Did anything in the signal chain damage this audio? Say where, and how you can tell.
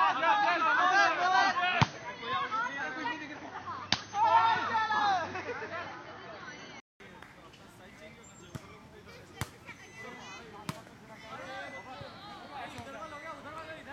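Yes. Until 7.0 s nothing sounds above 6.4 kHz, so the audio is dull and boxy, with a faint extra hiss. A 200 ms gap at 7.0 s gives way to full bandwidth, about 5 dB different in level. This points to input switched to a poorer device, likely at the driver stage.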